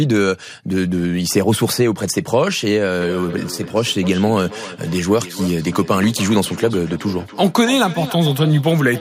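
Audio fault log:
3.01 s to the end: feedback echo between two devices. The speech returns roughly every 300 ms as a thinner, ringing copy, peaking about 14 dB below the direct sound. A second device in the room replays this microphone's signal, which this microphone picks up again, and the echo canceller cannot remove it.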